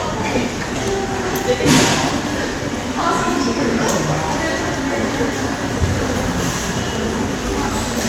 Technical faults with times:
none

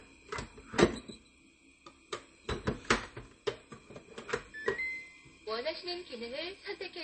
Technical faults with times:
0.00-7.03 MP3 compression

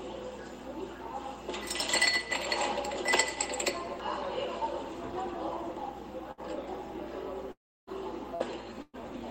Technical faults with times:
6.31-6.40 burst of packet loss
7.51-7.90 long network dropout
8.35-8.43 burst of packet loss
8.82-9.02 burst of packet loss

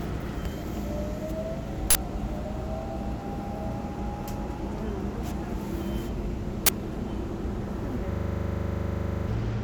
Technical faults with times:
1.90-1.95 uninitialised buffer
6.66-6.69 uninitialised buffer
8.12-9.28 system hang loop

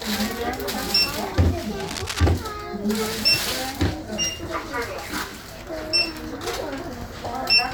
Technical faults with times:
1.78-2.20 cable scratch noise

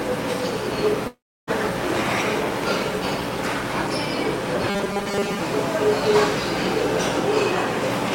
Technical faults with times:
1.07-1.50 long network dropout
4.69-5.39 robotic sound from repeated short buffers

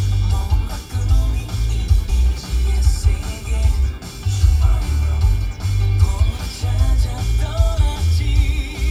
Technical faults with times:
2.08 compressed frames skipped

